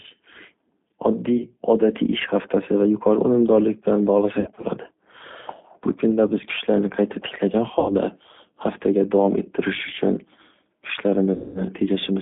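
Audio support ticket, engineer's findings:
G.729 codec, throughout: rough, synthetic speech limited to 200 Hz–3.6 kHz, which fits 8 kbit/s CELP coding. The spectrogram shows a hard ceiling and smeared harmonics.

VoIP packet loss concealed by the speech codec at 1.37–1.46, 4.40–4.67, 7.79–7.93 and 11.34–11.63 s: the decoder extrapolates from the last pitch and filter, giving a buzzy tone or coloured noise that fades. A decaying envelope is visible.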